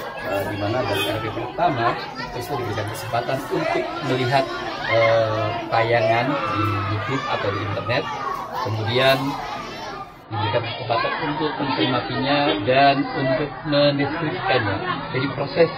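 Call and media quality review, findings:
Adaptive stream at a lower bitrate, 10.24 s to end: abrupt step down in quality, nothing above 5 kHz, more codec artefacts. Fits a player switch to a much lower AAC rendition, near 16 kbit/s. Seamless, no gap or dropout as with packet loss.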